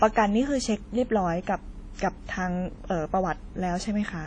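WMA compression runs through the whole clip: the speech sounds washy and ringing, with a hiss that swells and fades alongside it and nothing above 10 kHz, which fits a low bitrate near 32 kbps, likely from a Windows Media Audio encoder.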